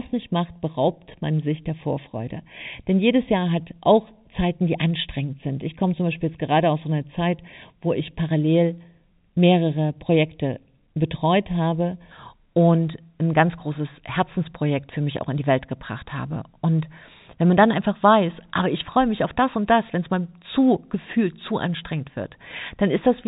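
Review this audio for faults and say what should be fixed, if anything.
From 0 to 12.11 s the speech sounds hollow and phasey. This is comb filtering from channel delay: one channel lags by under half a millisecond, cutting notches from around 1.5 kHz. Align the two channels to the sample before summing to mono.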